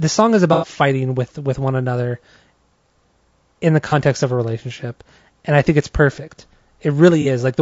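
Across the whole speech clip the voice is rough and grainy, with plainly audible coding damage. This is likely low-delay AAC compression of the AAC-ELD kind used in video calls, and the level of damage fits a bitrate around 32 kbps. Noise fills in between the harmonics and the top band sounds lowered or synthetic, which sets it apart from ordinary bandwidth-limited coding.

AAC frame loss with concealment follows at 0.53 to 0.68 s, between "song is" and "with with one another". It comes again at 3.89 to 3.94 s, after "in the" and before "of a relationship and", and once more at 7.22 to 7.26 s. The first loss runs about 0.15 s and the other two about 0.05 s each, which fits three lost frames and then single lost frames. The decoder filled each gap from the last good spectrum, so these patches sound smeared, noisy or phasey rather than silent, unlike a plain dropout.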